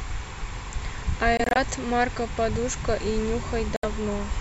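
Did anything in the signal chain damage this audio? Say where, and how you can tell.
Yes, at playback. The speech cuts to silence, scattered over 1.37 to 1.57 s and again at 3.76 to 3.84 s. This is likely a Bluetooth dropout, where late packets were dropped.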